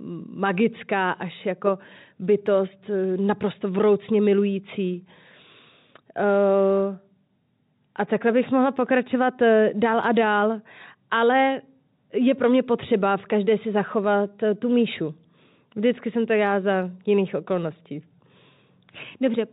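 Nothing faulty is audible in this speech recording.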